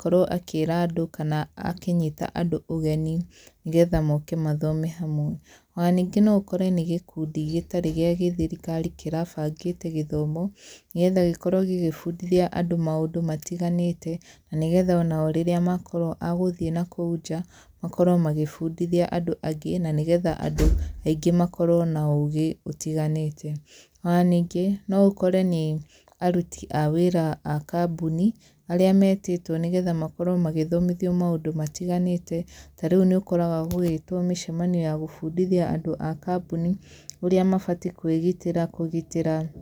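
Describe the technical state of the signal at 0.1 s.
At 0.1 s the speech signal is intact, with no audible fault at that moment.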